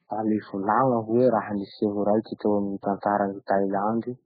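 From start to finish, the speech has nothing above 4.5 kHz. The top end stops at a hard edge. Weak detail flickers in and out between frames, giving a watery, swirling texture. Sibilants turn into metallic chirps. Consonant attacks blur. The damage is heavy, and the likely cause is MP3 compression at a very low bitrate, around 8 kbps. Starved of bits, the encoder cut the treble and dropped quiet frequency lines.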